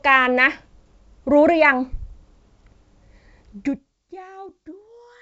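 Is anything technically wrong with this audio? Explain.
No, nothing in this speech recording points to a technical fault. It has gone through G.722 wideband telephone coding at 64 kbit/s, which leaves nothing above about 7.7 kHz and at most a faint trace of coding, and its smooth level changes come across as gentle fader moves.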